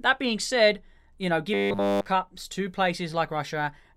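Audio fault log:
1.54 to 2.06 s, robotic sound from repeated short buffers. After "being said you know", the speech becomes a rigid metallic buzz at 100 Hz. All of it is repeats. Fresh audio likely arrived too seldom, so one short chunk looped. A 100 Hz buzz fits a 10 ms chunk.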